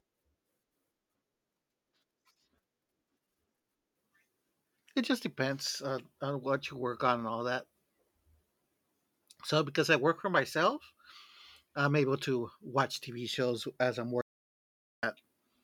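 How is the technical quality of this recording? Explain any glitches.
The recording has one clear glitch near the end. From 14.21 s to 15.03 s there is an audio dropout to silence. The speech cuts off mid-flow and about 0.82 s is silence, with no room tone. The input was likely lost while recording continued, writing silence. Whatever was spoken there is gone.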